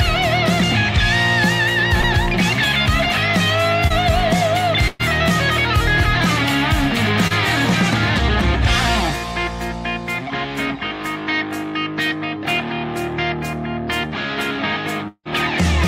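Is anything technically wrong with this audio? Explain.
Yes. The audio has three kinds of packet-loss fault, each covered by the receiver's concealment with different results.

At 2.01–2.05 s, 3.87–3.92 s and 7.27–7.32 s there is short concealed packet loss. About 20 ms of audio never arrived each time, and the receiver bridged the hole by extending the preceding sound for 20 to 30 ms. Each is a brief smear or wobble.

From 4.88 to 5.01 s there is a burst of packet loss. About 120 ms of audio is missing. The receiver kept continuing the last sound for around 116 ms, turning it down as it went, so it comes across as a held buzz or fading hiss before the audio resumes further on. It is much longer than the short losses, yet it never drops to silence.

From 15.08 to 15.27 s a fading stand-in sound lasts about 175 ms, then roughly 60 ms of silence follows before the audio returns, with around 180 ms of material gone. 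This is likely a long network dropout. The concealment running out into true silence is what separates it from the burst at 4.88 s.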